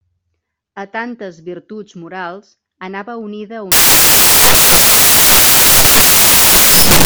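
From 3.72 s, right after "virtuts morals anava unida", the speech gives way to loud white noise that lasts to the end. These are samples built from the wrong bytes: misread byte order or alignment turns each sample's noisy low bits into its dominant part.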